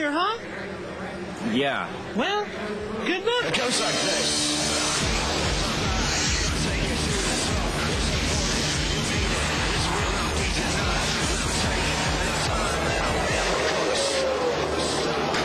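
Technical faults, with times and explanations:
Nothing stood out as a technical fault on listening to the clip.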